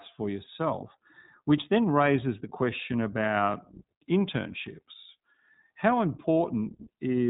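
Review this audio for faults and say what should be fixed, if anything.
iLBC codec damage throughout: each 20 ms frame is coded independently, leaving rough, synthetic speech with nothing above 3.8 kHz, which fits iLBC's 15.2 kbps mode. Prevent it by using a wideband codec such as Opus instead.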